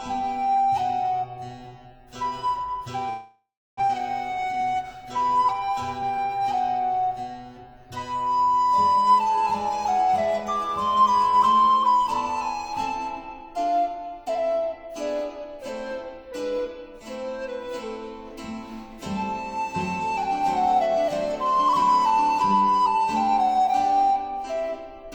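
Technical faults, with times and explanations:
3.09–3.81 s, long network dropout: the last sound is continued as a fading buzz or hiss, then 0.29 s of near-silence; 0.4 s of audio is lost, likely from a network outage.
3.88–6.55 s, jitter buffer speed-up: playback runs at 110% with unchanged pitch as short pitch-period slices are cut, trimming roughly 0.3 s of accumulated delay.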